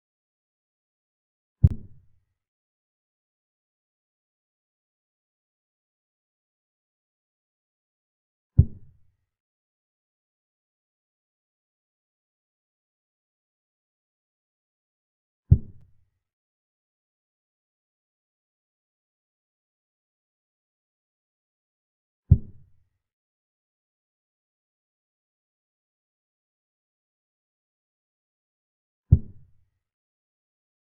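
At 1.67 s and 15.81 s, a gap between stream segments cuts in. Segment timestamps leave holes, filled with hard-edged silence, about 32 ms then 6 ms. No audio is lost.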